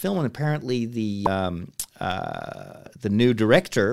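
At about 1.26 s there's a brief glitch from damaged data in the compressed stream. Some bytes got corrupted, so the decoder misread that stretch, lost its footing and had to hunt for the next valid frame header before playback could carry on.

From 1.97 to 2.71 s come six CD scratch ticks, the longest about 3 milliseconds, arriving at roughly eight per second. A blemish on the disc wipes out more data than error correction can rebuild on each rotation, and the player patches over the holes.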